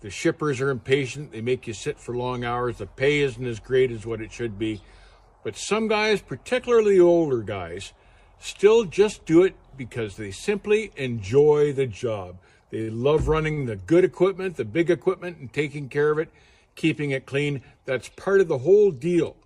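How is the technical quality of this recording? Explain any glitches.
There are two brief hitches, both short stalls from a late packet. At 12.81 to 12.90 s and 13.54 to 13.60 s, the jitter buffer briefly ran dry, so the last sound was stretched for about 63 ms and 33 ms respectively, causing a held sound with a slight buzz or dip before playback resumed.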